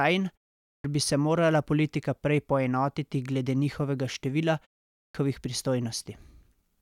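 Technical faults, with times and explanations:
0.6–0.84 s and 4.9–5.15 s, clipped start after a pause: both times speech resumes after a roughly 0.3 s gap with its first 0.24 s missing, so it jumps in abruptly. The output device dozed off in the silence and hadn't woken or re-locked in time.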